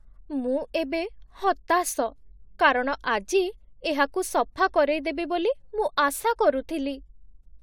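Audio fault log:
No technical fault can be heard anywhere in the recording; the signal holds steady with no audible breaks or disturbances.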